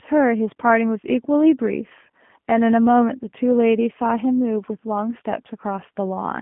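From start to finish the speech carries the sound of the G.729 codec, with damage that is plainly audible. The band is confined to roughly 150 Hz to 3.4 kHz, so low body and all high detail are missing. Each 10 ms frame is rebuilt from a vocal tract filter, a pitch predictor and a few coded pulses, which gives the voice a rough, synthetic buzz consistent with coding at about 8 kbit/s.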